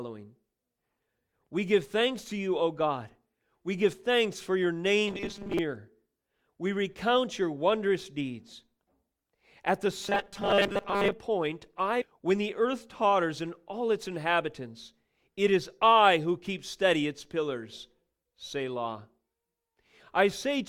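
From 5.08 to 5.59 s, and again from 10.02 to 11.12 s, the voice collapses into a rigid, metallic buzz at 200 Hz that still loosely tracks the speech: robotic sound from repeated short buffers. The likely cause is audio arriving too late, so the decoder keeps repeating its last fragment, which fits a 5 ms buffer, for most of each stretch. Unlike ordinary codec warbling, the pitch is locked at one fixed frequency rather than smeared.

At 12.01 to 12.05 s the speech jumps abruptly forward with a small blip, consistent with a stream segment being skipped, likely because one chunk of the segmented stream failed to load and playback carried on from the next. What separates this from a dropout is that there is no silent gap or repeated sound. The audio simply resumes further along, with a stretch of the programme missing.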